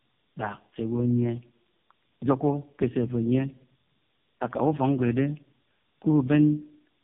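Speech, with tandem speech coding throughout. Nothing sounds above 3.5 kHz, and the voice is rough and warbly, which fits two narrowband AMR-style coders in series.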